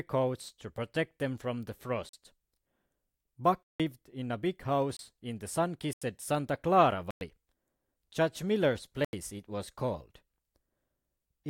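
Speech, interrupted by six blocks of digital silence at 2.09, 3.63, 4.97, 5.93, 7.11 and 9.05 s, lasting 43, 170, 25, 85, 105 and 85 ms. Each cuts out and back with no fade. Most lengths fit unfilled 2048- to 8192-sample buffers.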